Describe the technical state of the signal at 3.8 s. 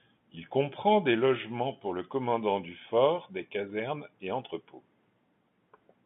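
At 3.8 s the speech is intact, carried cleanly through its G.711 telephone coding, with the narrow telephone band limiting it to roughly 150 Hz to 3.5 kHz.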